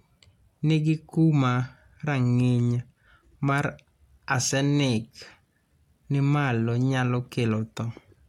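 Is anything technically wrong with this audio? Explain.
No, nothing technically wrong turns up here, so this speech clip can be taken as it is without any fault to point out.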